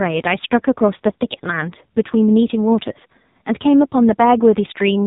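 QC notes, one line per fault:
Throughout: AMR narrowband mobile codec. The speech has been squeezed through the narrowband mobile speech coder at heavy damage, at a rate that fits a 5.9 kbps mode. Nothing above about 3.8 kHz survives, so sibilants and consonant edges go dull and boxy. At so few bits the pulse-driven vocal-tract model has too little to work with, and the voice comes out buzzy and synthetic.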